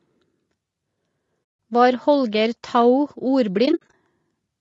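Throughout, the speech sounds rough and grainy, with noise filling the gaps between harmonics, likely from low-delay AAC compression, which fits a bitrate around 32 kbps. Unlike wideband codec smearing, the damage stays granular. The band stops near 8 kHz because of the call microphone processing.

AAC frame loss with muting leaves a 160 ms soft-edged silence from 1.43 to 1.59 s. From 3.65 to 3.93 s, 140 ms of gaps are scattered, the longest roughly 70 ms. These are faded holes, not repeated audio.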